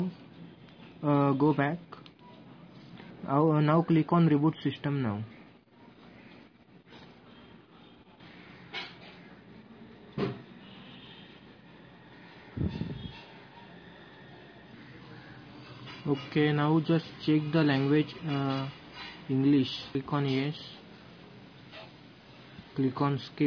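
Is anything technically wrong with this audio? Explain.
No, there is nothing technically wrong with this audio; the signal holds steady throughout without any audible fault.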